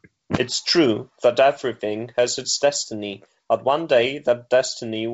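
No faults found: the speech passes through G.722 wideband telephone coding at 64 kbit/s, with at most a faint trace of that coding audible.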